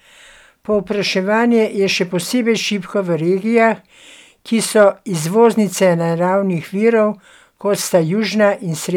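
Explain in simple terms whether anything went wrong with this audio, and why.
Yes, briefly. From about 4.79 to 4.85 seconds the speech hits hard clipping: its loudest peaks were slightly too big for the system to carry, so their tops were sliced flat. That flattening adds a short, harsh crackle at that moment.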